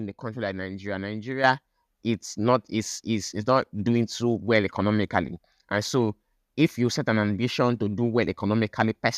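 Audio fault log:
1.44 s, microphone volume stepped up: the level of the whole speech signal jumps by about 7 dB in a single step, with voice and background noise rising together, because the input gain on the microphone itself was raised mid-stream rather than any processing after it. On a waveform the envelope abruptly widens at that instant and stays wider; on a spectrogram every band, including the noise floor between syllables, brightens at once.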